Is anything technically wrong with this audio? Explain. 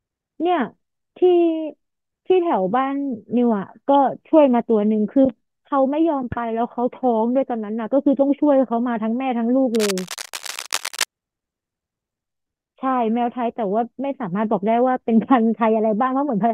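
Yes. There is cable scratch noise from 9.74 to 11.04 s, a stretch of dense, uneven crackling and rustling laid over the speech for just over a second, at roughly 10 dB below the speech level. The likely cause is a worn cable, connector or control being moved, so that its contact resistance jumps around rapidly and injects irregular bursts of noise into the signal. It is heard as a brief scratchy disturbance on top of the speech.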